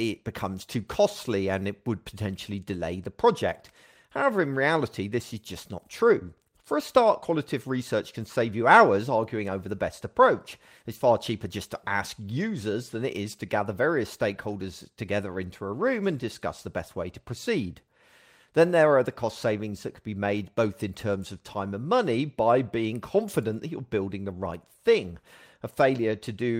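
No technical faults occur at any point in the recording, so there is nothing to describe in time order.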